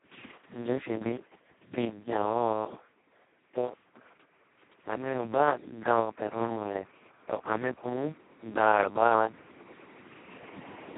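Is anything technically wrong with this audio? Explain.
Yes. Throughout, the speech carries Speex codec damage. Its sparse excitation sounds hoarse and near-robotic, fitting roughly 2 kbps. Nothing remains above 3.9 kHz.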